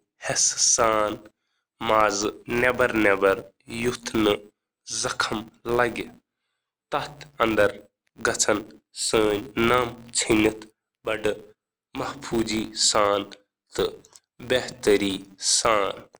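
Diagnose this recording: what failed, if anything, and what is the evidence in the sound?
What failed is a filter restarted on every block, somewhere in the processing chain, most likely a call-processing or DSP stage. For the whole clip there's a buzz at 200 Hz riding on the speech, getting louder when the talker does and dropping away in pauses. That's the signature: each block starts the filter from silence, so each one kicks off with a small transient. A 200 Hz tick rate fits blocks about 5 ms long.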